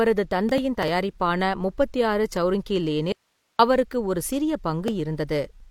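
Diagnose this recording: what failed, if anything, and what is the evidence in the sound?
Audio dropout to a faint residue, 3.12–3.59 s: speech snaps to hiss roughly 50 dB down until "அவருக்கு ஒரு சிறிய", likely a brief analogue wiring break.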